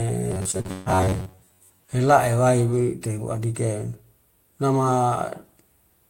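From 0.32 to 1.93 s the speech turns into a stiff metallic buzz near 94 Hz. That's robotic sound from repeated short buffers, likely a roughly 11 ms chunk replayed over most of the span. Overlapping it, from 0.51 to 0.88 s, repeated packet loss punches several holes, the longest 138 ms, and about half that stretch is patched with continued sound, so it gets choppy and robotic.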